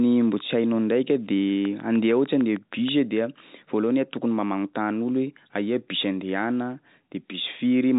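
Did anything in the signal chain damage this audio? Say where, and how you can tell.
Yes. A train of clicks runs from 1.65 to 2.89 s: about ten regular pulses at 6.5 per second, peaking about 5 dB above the signal. This likely comes from interference in the analogue wiring or a faulty connection or power supply.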